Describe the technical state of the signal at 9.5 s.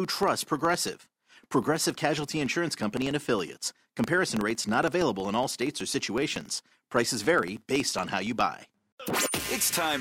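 At 9.5 s the sound carries a filter restarted on every block, a fault present for the whole clip. The filter drops its memory at each block boundary and starts again from silence, so every block opens with a small transient. These repeat at 21.5 Hz, which fits a 2048-sample block, and are heard as a low buzz or ticking that rises and falls with the signal's level. A waveform shows evenly spaced discontinuities, and a spectrogram shows thin vertical stripes at that spacing.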